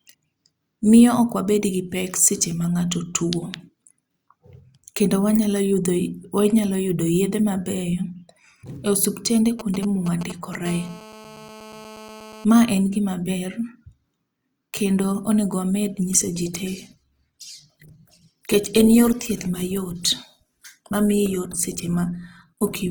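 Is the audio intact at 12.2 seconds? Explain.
No, 12.2 s sits inside a GSM phone buzz from 10.66 to 12.45 s: a nearby handset's 217 Hz transmit bursts get rectified into a steady, raspy buzz about 19 dB under the speech.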